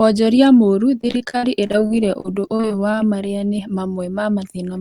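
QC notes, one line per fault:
1.01–2.97 s repeated packet loss (robotic sound): frequent holes up to 54 ms, patched by extending prior audio, give choppy speech with pieces missing; spectrogram shows stuttering, smeared repeated blocks.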